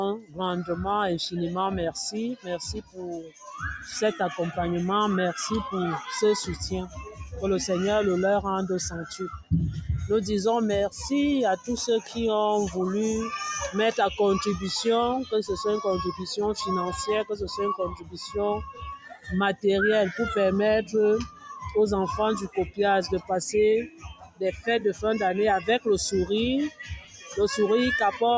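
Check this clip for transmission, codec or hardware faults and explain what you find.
The faults here come from a speech-oriented noise suppressor acting on non-speech sound. The call's microphone processing itself behaves as expected, with nothing above 8 kHz.

Noise suppressor applied to music or sounds, throughout the clip: the suppressor treats sustained, steady content and ambient tails as noise and pulls them down. Transients pass while held material sinks. The gain it applies swings by roughly 10 dB, so the level pumps and flutters and the sound loses body between onsets.

Sound cut by the noise suppressor, at 0.18–0.73 s, 2.36–3.48 s, 6.87–7.26 s, 9.12–9.51 s, 10.9–12.17 s, 17.3–19.64 s, 20.84–25.68 s and 26.7–28.21 s: in these stretches the suppressor judged the sound to be noise and attenuated it more heavily than the rest. The deepest drops are about 16, 17, 10, 18, 12, 17, 19 and 15 dB respectively. 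Decays are cut short and steady passages dip, with the longest dips around 21–26 s.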